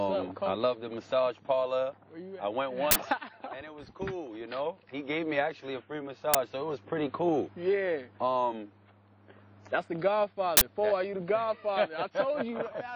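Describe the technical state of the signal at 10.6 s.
Right there you've got an uninitialised buffer, 10.57 to 10.61 s: about 43 ms of leftover memory played as samples, a sudden loud digital noise burst, fitting a 2048-sample block.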